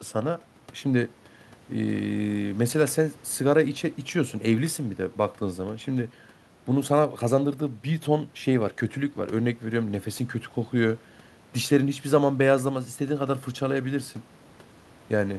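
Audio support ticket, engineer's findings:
No faults found in the speech recording. Room noise audible well below the speech, about 30 dB down, part of the recording environment.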